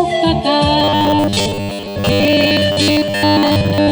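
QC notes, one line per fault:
0.80 to 3.91 s, robotic sound from repeated short buffers: from 0.8 s to the end, the sound turns into a rigid, metallic buzz at a fixed pitch of 100 Hz that only roughly tracks the underlying audio. The likely cause is fresh audio arriving too seldom, so playback fills the gaps by looping the last 10 ms chunk while real material is skipped. With most of the span made of repeats, that 10 ms period sets the 100 Hz drone.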